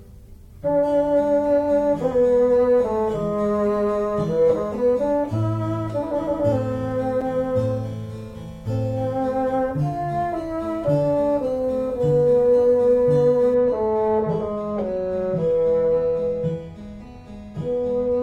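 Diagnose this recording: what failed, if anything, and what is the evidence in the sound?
A gap between stream segments opens at 7.21 s: the player inserts roughly 6 ms of silence where two streamed segments' timestamps fail to meet, which fits a 4-second segment boundary. On a waveform it is a flat, hard-edged notch. On a spectrogram it is a thin vertical blank band.

From 13.54 s to the end, de-emphasis is applied wrongly at the processing or playback stage. A treble cut meant to undo pre-emphasis that was never present, or applied a second time, tilts the response down by about 10 dB at 10 kHz relative to 1 kHz. The sound turns dull and muffled, and a spectrogram shows the upper bands visibly dimmed.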